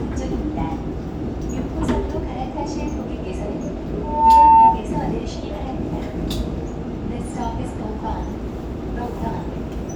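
Loudspeaker feedback squeal runs from 4.03 to 4.84 s. A microphone picks up its own loudspeaker, and the loop gain exceeds unity at 898 Hz. That pure tone swells over roughly a third of a second into a howl standing around 15 dB above the sound.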